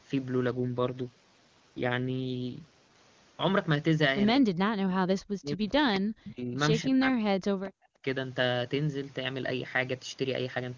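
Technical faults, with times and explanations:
0.52–2.96 s, AMR rate drop: the speech turns rougher and more synthetic while the band stays the same and nothing goes missing. The texture fits the AMR-WB codec stepping down from 23.85 to 8.85 kbit/s, so fewer bits describe the voice.
4.41–6.58 s and 6.84–8.05 s, speech suppressed in double talk: the speech dips sharply, by around 40 dB at the deepest, over roughly 2 s and then 1 s. This likely came from an echo canceller turning down both talkers while both sides spoke at once.
7.66–7.71 s, echo leak: a brief delayed copy of the speech appears about 238 ms behind it and roughly 25 dB below it. This is likely loudspeaker sound that the far side's echo canceller failed to remove, so it was sent back down the line.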